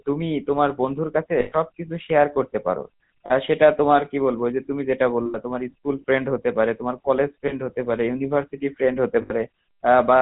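The whole clip has passed through the GSM full-rate codec, which fits a 13 kbps bitrate. It rebuilds the vocal tract from a compact filter model and drives it with a sparse, regularly spaced pulse train, keeping only a third of the excitation samples. Nothing above 4 kHz survives, so the speech sounds dull and boxed-in, with a plainly audible buzzy, gravelly roughness laid over every syllable.

Lost GSM frames break through at five points: 1.40 to 1.53 s, 3.26 to 3.32 s, 5.26 to 5.37 s, 7.48 to 7.53 s, and 9.22 to 9.32 s. Each time, the decoder fills the gap by reusing the last good frame's filter and excitation settings. The sound freezes into a rough, metallic ring. The gaps last 120 ms, 40 ms, 80 ms, 20 ms and 80 ms. The 120 ms one fits a run of about six frames and gives the longest hold.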